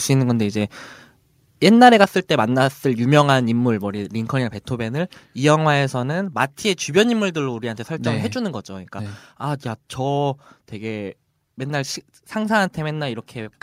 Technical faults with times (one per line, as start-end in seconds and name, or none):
1.81-2.04 microphone overload
2.04 microphone volume stepped down
7.14 microphone volume stepped down